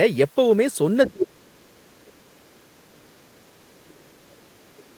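At 1.06 s a brief scrap of a second voice, the other side's voice leaking through, sits roughly 20 dB under the speech. It is likely loudspeaker echo that the echo canceller failed to remove, and it is heard as an added voice, not as a loss of the talker's. From 1.1 to 3.4 s the speech is suppressed in double talk, dipping for about two seconds, at worst by some 35 dB, likely as the canceller fails to tell the talker from the echo and turns both down. This is the talker's own speech being turned down. Between 3.4 and 3.79 s the leaked voice returns, much fainter, around 40 dB down. Then from 3.79 s to the end the talker's speech is pushed down again, by as much as about 35 dB.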